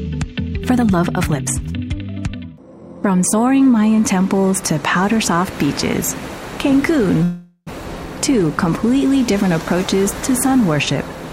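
From the start to about 3.34 s there's a time-stretched section: the audio runs at roughly 1.38 times its normal pace while the pitch stays put. It's most likely software squeezing it to fit a length by dropping short slices, so it comes across rushed.

At 7.23 s a call audio freeze sets in and lasts until about 7.69 s. The last sound hangs on as a fading buzz for around 434 ms, with about 60 ms of it going silent, and then the audio picks up right where it stopped, with nothing lost. That points to packets likely being held up in transit while the jitter buffer ran dry, which pushes everything after it about 434 ms later.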